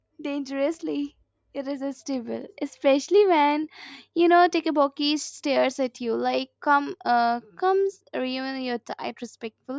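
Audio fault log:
No faults can be heard anywhere in the speech. Nothing in the recording calls for an entry in this log.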